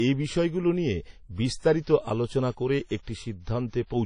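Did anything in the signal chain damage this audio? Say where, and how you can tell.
Yes, at the codec stage, and it runs through the whole speech clip. This is low-bitrate audio saved at a high bitrate. The file carries content up to about 20.3 kHz, as you'd expect from a 192 kbit/s MP3, but the speech keeps the coarse, smeared artefacts of a much leaner encode, which fits a 32 kbit/s WMA pass. The likely story is that the material was squeezed hard once, then re-encoded generously. The bigger MP3 just preserves the damage and can't recover what the first pass stripped out.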